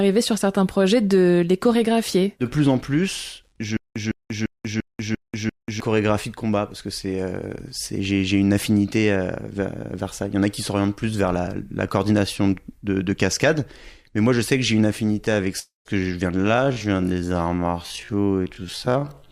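From 3.77 to 5.80 s there's a stutter with silent gaps: a 156 ms fragment repeats six times, each followed by about 189 ms of dead silence, so it pulses every 345 ms. That's likely a player stalling and replaying its last chunk, losing the audio in between.

At 15.59 s a long network dropout hits, running to 15.87 s. Roughly a quarter-second of audio goes missing; the gap gets filled with a fading smear of the last sound, then about 150 ms of silence before things pick up, minus the lost part, likely from packets never arriving.

From 16.32 s to the end it's a time-stretched section, slowed to about 0.52 times speed, roughly half pace, with pitch held steady. The slowdown kicks in abruptly and drags.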